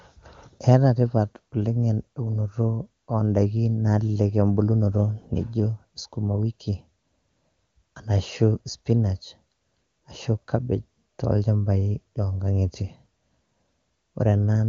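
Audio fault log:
The speech carries the band-limited sound of an AMR wideband (HD Voice) codec running at what sounds like its highest rate, about 23.85 kbit/s, and the signal shows no technical fault.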